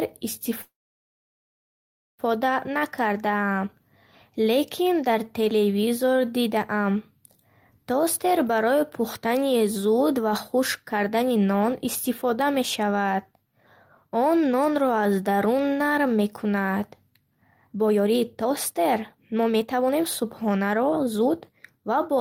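A speech clip with a call audio freeze from 0.61 to 2.22 s: the sound briefly continues as a fading buzz, then about 1.5 s of silence shows as a flat waveform and a blank spectrogram before speech resumes intact, likely from delayed packets emptying the jitter buffer. A jitter buffer speed-up follows at 10.14 to 11.87 s, before "истифода мешавад", running 10% fast with roughly 0.2 s trimmed, and again at 17.11 to 22.17 s, after "аз дарун нарм мекунад", at 23% with about a second removed. On a spectrogram, harmonics keep their spacing while syllables crowd closer together.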